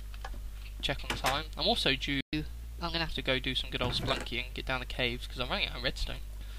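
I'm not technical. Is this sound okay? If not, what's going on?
No. At 2.21 s the sound cuts out for about 120 ms, a playback stall, likely the player briefly running short of data. From 2.33 to 3.13 s comes catch-up at higher speed: the sound runs 1.15 times fast, about two semitones higher, to recover the lost time, then returns to normal.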